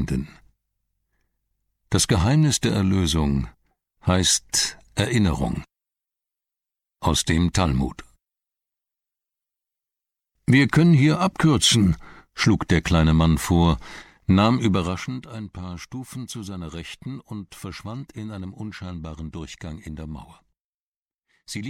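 From 14.64 to 15.26 s a fast ticking rides on the sound as it drops around 15 dB: zipper noise, from the level change stepping about fifty times a second without smoothing.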